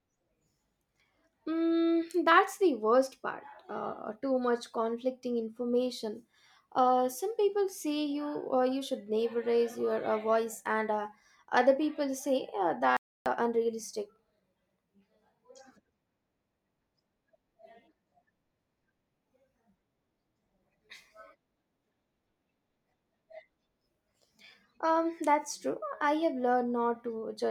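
At 12.97 s the speech cuts out abruptly mid-flow and stays silent for 0.29 s before resuming at 13.26 s. This is a playback stall, likely caused by the player running short of data or its output thread being briefly blocked.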